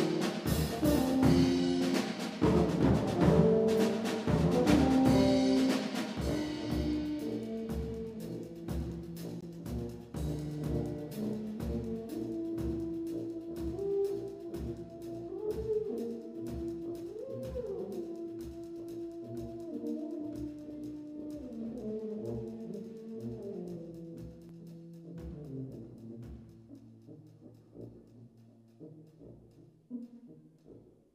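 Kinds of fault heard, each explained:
Damaged data in a compressed stream: at 9.41 to 9.43 s and 24.49 s, corrupted bytes make the decoder misread frames and lose sync, briefly breaking the sound.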